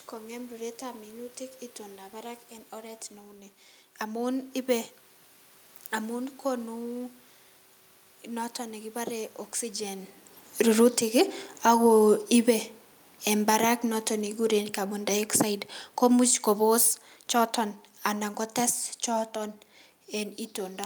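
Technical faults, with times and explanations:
10.52–12.59 s and 13.21–20.39 s, automatic gain falling: after "noton nekibore oxygen" the gain control judges the input too loud or its background noise too strong and lowers it by about 3 dB, then by about 10 dB. The room noise sinks with the voice, so the waveform envelope tapers and the spectrogram's noise floor darkens evenly across all frequencies.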